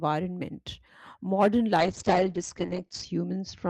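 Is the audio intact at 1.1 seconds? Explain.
Yes, the audio is intact at 1.1 seconds, with no dropout, click, distortion or other fault at that point.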